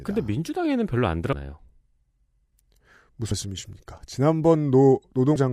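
At 1.33 s, 3.31 s and 5.36 to 5.39 s the speech breaks into brief glitches: damaged data in a compressed stream, where the decoder misreads corrupted frames and resyncs.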